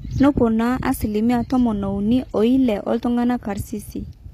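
Throughout the speech, a low-bitrate codec, likely HE-AAC compression, codes only the lower spectrum and rebuilds the treble from copied bands, in a way that fits roughly 24 kbps. The top sounds bright but synthetic: s sounds turn gritty and lispy, and nothing reaches above 14.9 kHz.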